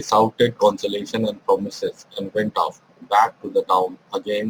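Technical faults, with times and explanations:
Throughout: crude rate conversion. The speech was resampled by simply dropping or repeating the nearest samples, with no filtering. The pattern is consistent with a 48 kHz to 44.1 kHz step. That uneven timing grid adds inharmonic tones around 30 dB below the speech, heard as a gritty fizz riding on loud, bright sounds. Unlike hiss or dither noise, it follows the signal and disappears in pauses.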